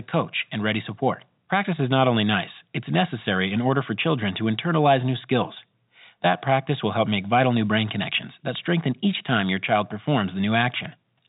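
Nothing stood out on listening; the speech has the narrow band of an ordinary telephone line, with nothing above about 3.8 kHz.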